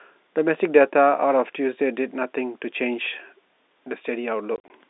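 Between 4.56 and 4.7 s the speech breaks up with packet loss filled with silence. About 80 ms of audio is missing, scattered across a 140 ms stretch, with the longest single gap lasting 40 ms. The receiver inserted dead silence instead of concealing the holes, so each dropout starts and ends abruptly. The gap lengths suggest 20 ms packets, with several dropped. The narrow 250 Hz to 3.7 kHz telephone band is audible throughout.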